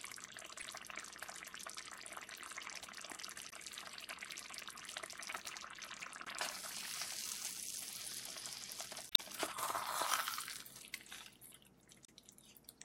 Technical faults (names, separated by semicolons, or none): damaged data in a compressed stream